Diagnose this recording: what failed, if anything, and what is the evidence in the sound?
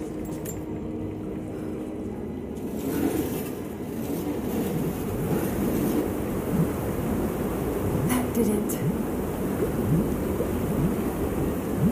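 A loud pop occurs between 9.34 and 9.59 s as two sharp impulses in quick succession, peaking roughly 5 dB above the surrounding material. The sound continues underneath without a break. This is most likely an analogue wiring event, such as a plug, switch contact or static discharge, injecting a voltage step that downstream circuitry shapes into a brief pulse. On the waveform the pops stand out as two tall spikes. On a spectrogram they appear as thin vertical broadband lines.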